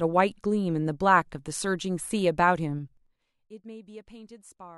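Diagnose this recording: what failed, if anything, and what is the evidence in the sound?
Zipper noise from a gain stage in the playback or call-processing chain that updates its level per buffer without smoothing. Between 2.79 and 3.25 s the speech drops by roughly 25 dB in 5 dB steps, about ten per second, and each jump leaves a small click, so the fade audibly ticks. Because each click lands exactly on a level step, it is not random crackle from wiring or dropouts.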